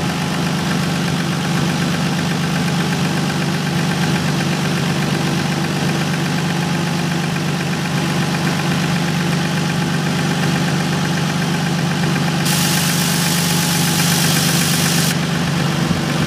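From 12.46 to 15.12 s, pre-emphasis is left on. The treble boost applied for transmission was never undone by the matching de-emphasis cut. The tilt rises steadily with frequency, which fits a 75-microsecond FM curve. At 10 kHz the audio sits about 13 dB higher relative to 1 kHz than it should. For this stretch the sound turns thin, bright and sibilant. At 15.12 s the balance returns to its earlier state.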